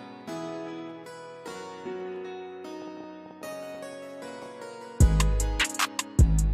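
A train of clicks runs from 2.82 to 4.47 s: around fifteen similar pulses at about 8.5 per second, unevenly spaced and roughly as loud as the sound itself. It is heard as ticking over the audio, likely from electrical interference or a faulty connection.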